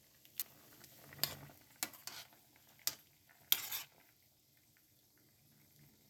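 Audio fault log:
0.42, 1.81, 3.99, 4.97 and 5.67 s, dropped buffer (overrun): each is a jump where the sound skips ahead with no silence, skipping roughly 50 to 150 ms, likely because the hardware overwrote samples before they were read. The waveform shows an abrupt step; the spectrogram shows a thin vertical line.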